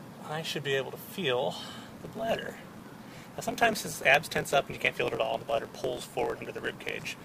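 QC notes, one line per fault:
1.88–7.25 s, block size mismatch (truncated): from 1.88 s to the end, a steady buzz at about 45.9 Hz sits on the audio, and the material runs roughly 1.07 times fast while keeping close to its normal pitch. An upstream stage is producing longer blocks than the next stage accepts, which fits 1024-sample blocks being written. The tail of each block is discarded, so the abrupt jump at every block boundary produces the buzz and the lost audio speeds up playback.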